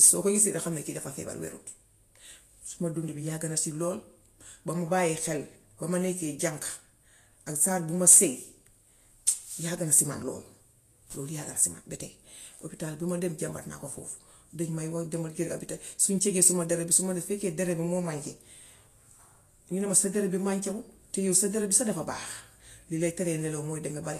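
Throughout, the speech sounds hissy and grainy, with smeared consonant attacks and nothing above 14.2 kHz, likely Vorbis compression at a low bitrate around 35 kbps.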